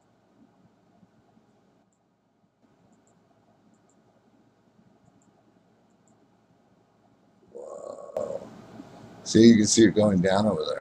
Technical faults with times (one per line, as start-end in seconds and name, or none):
1.83-2.62 sudden gain jump
8.17-10.79 sudden gain jump